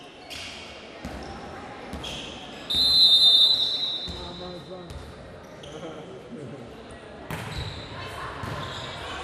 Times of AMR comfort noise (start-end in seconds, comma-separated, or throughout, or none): none